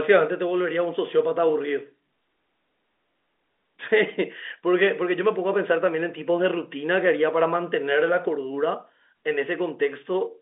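No faults detected in this speech; the band sits at roughly 250 Hz to 3.6 kHz, consistent with G.711 telephone coding.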